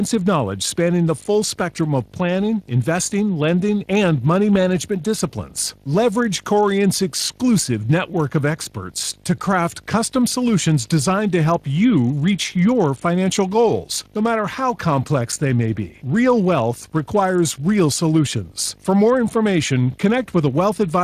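Video or display buzz runs throughout the speech. A screen or video cable is coupling into the audio path, leaving a 50 Hz field-rate buzz with hash above it, plus a faint whine near 15.6 kHz from the line scan, all sitting roughly 30 dB below the speech.

Speex codec damage is also present from start to finish. The CELP coder's excitation is rebuilding the speech with audible loss, giving it a noisy, hoarse grain. The bitrate points to around 22.4 kbps, and nothing of the speech itself extends above 15.4 kHz.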